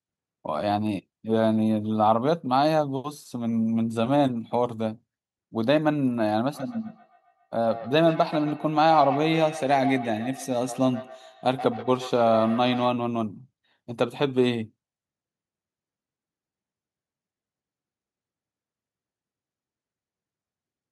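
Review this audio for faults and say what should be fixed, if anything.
Feedback echo between two devices runs from 6.54 to 12.97 s. Speech returns about every 150 ms, peaking about 11 dB below the direct sound. A second device replays it and this microphone picks it up again. Prevent it by muting one device's speaker or microphone.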